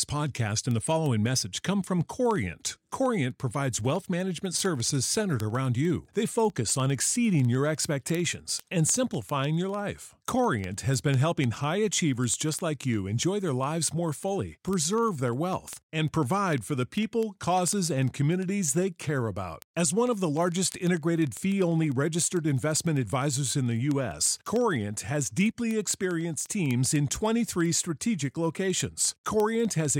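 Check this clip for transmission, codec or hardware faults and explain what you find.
One hardware fault runs through the speech. Word clock ticks: from 0.11 s to the end, sharp ticks repeat about twenty times a second. An unlocked receiver, clocked roughly 500 ppm off, slips one sample each time.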